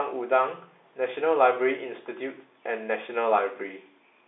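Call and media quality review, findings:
No faults found; speech sits in the narrow 300 Hz to 3.7 kHz telephone band with nothing above 3.8 kHz, consistent with G.711 mu-law telephone coding at 64 kbps, and any coding noise is faint at most.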